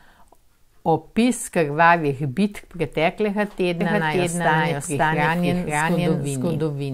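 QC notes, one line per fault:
3.81 s to end, doubled audio track: from here a second full-band copy of the speech runs about half a second behind the first, at roughly the same level, so each syllable returns as a dry, uncoloured repeat rather than a decaying echo. It cuts in abruptly with no fade. Likely cause is a second capture by a slower path, or an edit holding two offset copies. The waveform and spectrogram show every onset and formant pattern duplicated at a fixed offset.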